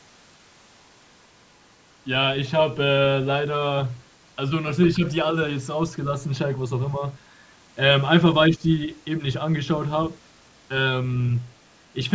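Between 1.13 and 1.82 s there's a faint second voice underneath, sitting far below the talker. That's the other side's voice leaking through, likely the far end playing from a loudspeaker and the echo canceller not fully scrubbing it from the mic. It comes back briefly at 11.49 to 11.76 s.

In between, the talker's level sags: a slight dip at 4.96 to 5.05 s and a deeper, roughly 150 ms one at 8.49 to 8.62 s. That reads as speech suppressed in double talk, likely the canceller ducking everything while both sides overlapped.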